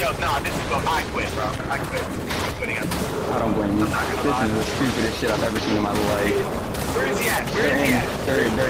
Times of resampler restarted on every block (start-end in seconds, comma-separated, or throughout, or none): none